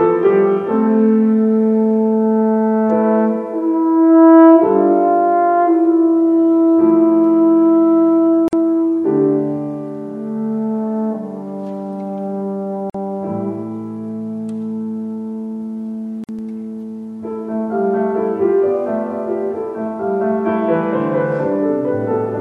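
At 8.48 s, 12.90 s and 16.24 s the sound stops dead for 49 ms, 47 ms and 50 ms, respectively: a gap at a join of encoded pieces. Each piece was encoded on its own, and the encoder's start-up silence and final-frame padding were left in when they were butted together. Unlike a packet dropout, nothing is missing. The sound picks up exactly where it broke off, and the gap's edges are softened by the codec.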